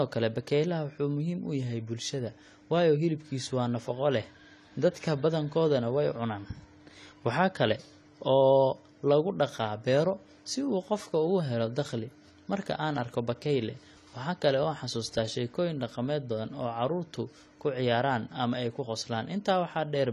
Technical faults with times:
0.00-20.12 AAC compression

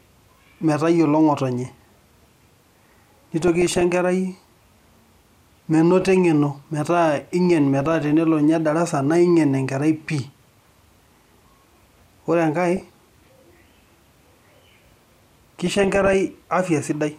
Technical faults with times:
2.91-3.81 DAB burbling
6.01-6.17 DAB burbling
7.80-8.13 DAB burbling
10.28-11.02 DAB burbling
12.77-13.27 DAB burbling
15.67-16.14 DAB burbling

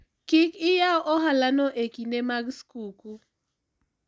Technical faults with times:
none

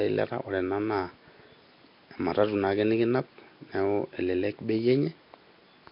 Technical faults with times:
0.00-5.92 Nellymoser compression

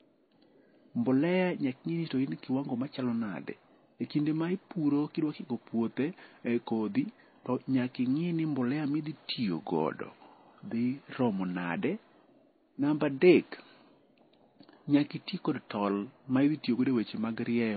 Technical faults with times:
0.00-17.77 transcoding between lossy codecs

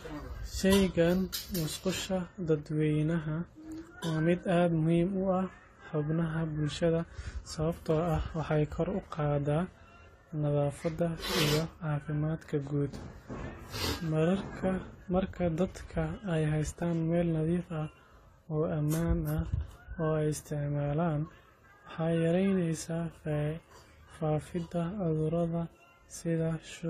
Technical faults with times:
0.00-26.90 transcoding between lossy codecs

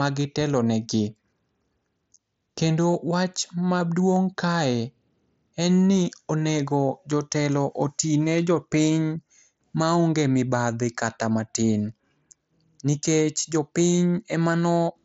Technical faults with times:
none

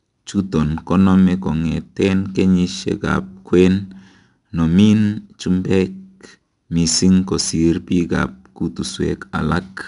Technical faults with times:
0.00-9.87 4-bit ADPCM compression

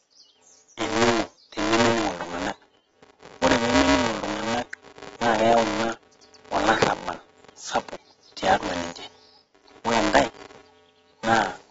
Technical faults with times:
0.00-11.70 filter restarted on every block
0.00-11.70 AAC compression

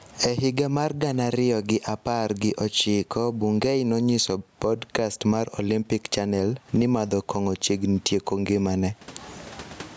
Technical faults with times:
0.00-9.97 gain pumping

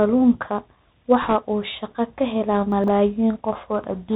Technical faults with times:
0.00-4.16 Bluetooth CVSD headset codec
1.22-1.35 bit errors on a Bluetooth voice link
2.72-2.88 chunks out of order

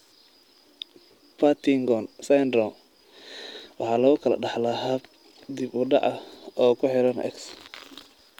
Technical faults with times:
none

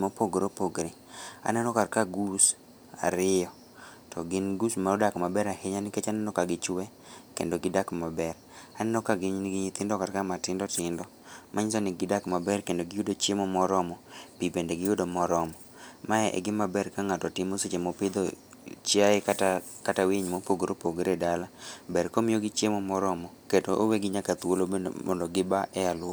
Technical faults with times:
1.23-1.28 Bluetooth stutter

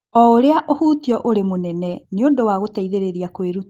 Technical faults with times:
none

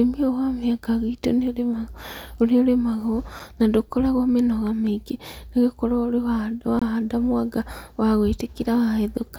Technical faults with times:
6.79-6.82 block of digital silence

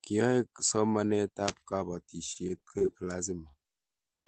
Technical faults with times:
2.33-2.90 repeated packet loss (robotic sound)
3.51-3.56 short concealed packet loss

